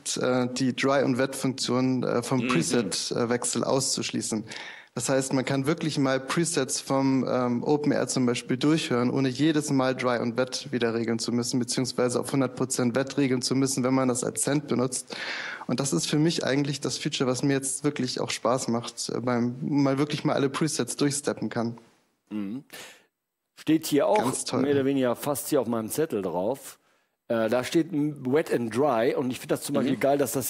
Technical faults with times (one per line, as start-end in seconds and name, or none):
none